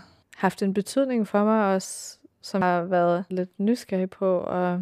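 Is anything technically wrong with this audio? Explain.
Yes. At 2.61 s, just after "betydning for mig også", there is a CD skip: a very brief mute of a few milliseconds and a tick as the laser jumps to another turn of the spiral. Unlike a simple dropout, the speech resumes from a different point rather than continuing where it stopped.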